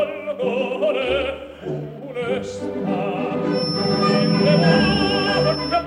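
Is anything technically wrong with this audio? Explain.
Yes. A feedback whistle starts at 3.49 s and lasts to the end. It is a thin, steady tone at 5.3 kHz, about 10 dB below the sound. It swells and fades slowly in level. The likely cause is a speaker-to-microphone loop held just at the edge of feedback.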